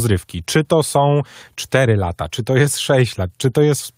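No technical faults are audible.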